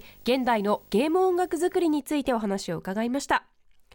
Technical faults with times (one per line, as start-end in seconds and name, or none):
0.00-2.00 video or display buzz